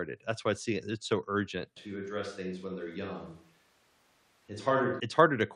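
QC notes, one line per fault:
1.77–5.00 s, switch to a distant microphone: the speech abruptly turns roomy and hollow, loses its low end, and drops about 5 dB in level, with background room noise rising to roughly 35 dB below the speech. It snaps back to the close, full sound just as suddenly at 5.00 s. The likely cause is that the close microphone's signal dropped out and a far-off pickup, such as a camera microphone, covered that stretch, hearing more of the room than the talker.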